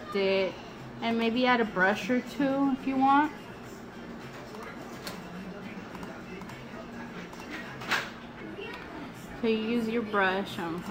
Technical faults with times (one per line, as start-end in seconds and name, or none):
none